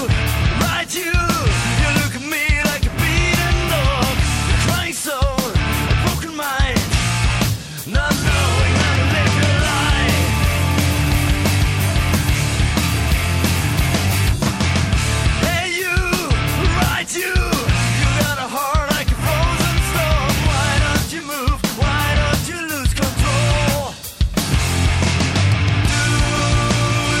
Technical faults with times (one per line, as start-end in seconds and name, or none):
none